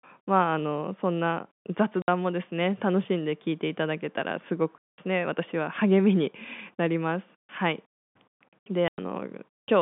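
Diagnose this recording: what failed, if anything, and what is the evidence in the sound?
Network packet loss filled with silence: holes of 60, 200 and 100 ms at 2.02, 4.78 and 8.88 s, fitting 20 ms packets, appear as flat waveform and empty spectrogram columns.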